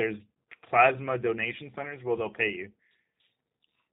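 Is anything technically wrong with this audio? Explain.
Yes. From start to finish this speech has been through a G.729 codec, and the damage is plainly audible. The codec models each 10 ms frame as a vocal tract filter plus a pitch predictor and a few pulses rather than storing the waveform, so the voice comes out intelligible but a bit rough and synthetic. Nothing above 4 kHz survives, which dulls the top end. The whole thing sounds like a low-rate VoIP stream, consistent with the 8 kbit/s G.729A variant.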